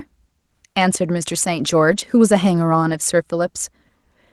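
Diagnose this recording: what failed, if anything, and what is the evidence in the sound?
Network stage: lost packets rebuilt from error correction at 1.91–2.01 s and 2.89–2.95 s, audible as brief rough, noisier patches without gaps, as the decoder played the low-bitrate Opus copies.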